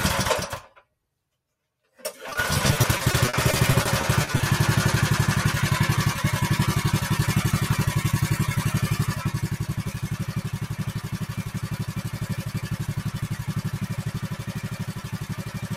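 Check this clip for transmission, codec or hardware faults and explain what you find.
Three faults are present, all tied to real-time transmission processing.

Throughout the clip, a noise suppressor applied to music or sounds is active. It was built for speech, so it treats steady tones and tails as noise. Level swings of around 15 dB follow. Held sounds sink and pump while attacks pass.

From 2.29 to 4.41 s there is repeated packet loss with a robotic sound. About twenty short holes occur, the longest 40 ms. Each is patched by stretching the last sound. Roughly a fifth of the span is concealed. It sounds choppy and robotic.

From 9.35 s to the end, the suppressor cuts sound it mistakes for noise. Steady and decaying parts drop by about 12 dB at worst. Their tails end early. Sudden onsets still come through, so the passage sounds thin and uneven.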